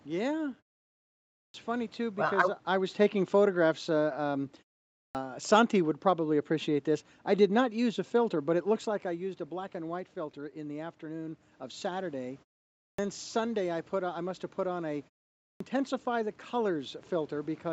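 At 1.43, 5.03, 12.86 and 15.49 s the speech resumes after a pause of half a second to 0.89 s with a clipped start: the output device has gone idle in the silence and needs about 0.11 to 0.12 s to wake, so the opening sounds are lost and the speech begins abruptly. These cut into the speech itself.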